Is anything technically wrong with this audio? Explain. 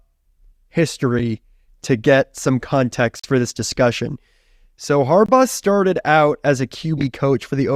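Yes. Two blocks of digital silence cut this speech, at 3.19 to 3.24 s (about 43 ms, which fits a 2048-sample buffer left unfilled) and 5.26 to 5.29 s (24 ms). Unlike a faded dropout, each is a hard cut to silence with no fade.

Frames out of order garble 6.98 to 7.04 s: two adjacent 20 ms frames were decoded swapped, giving a garbled flutter. Unlike a skip, no time is lost.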